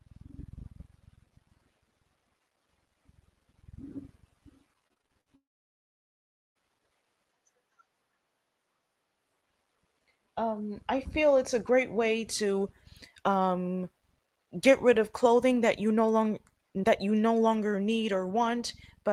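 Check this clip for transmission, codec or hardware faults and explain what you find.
Two transmission faults sit close together early in the clip, both coming through the call path, where the audio is band-limited near 12 kHz, consistent with Opus at around 24 kbps.

From 4.87 to 5.28 s there is repeated packet loss, giving a robotic sound. About half a dozen short holes, the longest around 47 ms, were each patched by stretching the last bit of speech, so roughly a third of that span is filler. It sounds choppy, with pieces missing. On a spectrogram, smeared, flattened harmonic blocks interrupt normal speech. The waveform shows repetitive, overly regular segments.

From 5.36 to 6.57 s comes a long gap in the audio, likely a long network dropout. For about 1.2 s nothing new was played. The receiver briefly continued the last sound as a fading buzz, then left near-silence for over a second before speech resumed, with that portion missing. 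The waveform shows a short decaying tail, then a flat line. On a spectrogram, a brief smear fades into an empty band across all frequencies.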